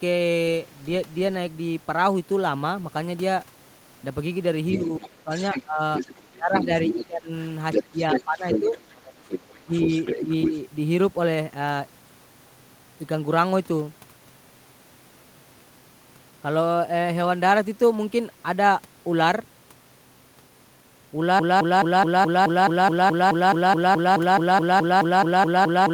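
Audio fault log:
4.72–10.58 s: other side's voice leaking through. A second voice runs under the talker at roughly 10 dB below the main speech. This is likely the far end's loudspeaker playback reaching the microphone and not being fully removed by the echo canceller.
4.75–8.76 s and 9.61–10.53 s: speech suppressed in double talk. The talker's level drops by up to about 20 dB in pieces, around two seconds in the first stretch and about a third of a second in the second. This likely happens because the echo canceller turned down both voices while they overlapped.
21.39 s to the end: broken-record loop. A 213 ms fragment repeats exactly and back to back until the clip ends, and the audio that should have followed is gone. This likely comes from a stalled player, encoder or stream that kept resending its last held buffer.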